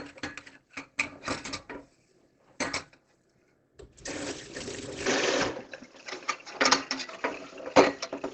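The clip is a recording of everyday sounds, and its whole length is band-limited to nothing above 8.3 kHz, with a muffled, hoarse quality that is plainly audible throughout. That combination points to Opus compression, likely in its speech-oriented SILK mode at wideband, which fits a low bitrate around 16 kbps. In that mode the encoder models the signal rather than preserving each band's detail, so non-speech sounds come out dulled and roughened instead of crisp. At 5.06 s the character changes abruptly and stays changed to the end. The top of the spectrum drops to nothing above 7.1 kHz, the level shifts by about 5 dB, and a faint new noise floor appears well below the signal, with no gap at the transition. This pattern suggests the input switched to a poorer device partway through the recording, with a narrower-band microphone and its own noise replacing the original one.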